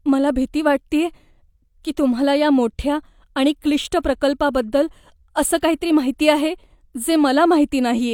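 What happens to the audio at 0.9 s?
Nothing goes wrong at 0.9 s: the speech continues intact through that moment, with no dropout, click, distortion or other fault.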